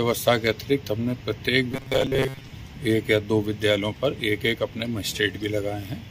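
From 1.72 to 2.52 s there's robotic sound from repeated short buffers: a rigid metallic buzz near 134 Hz, likely from re-playing tiny chunks while most real audio is skipped.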